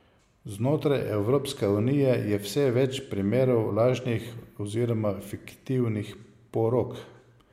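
No technical faults are audible anywhere in the speech recording.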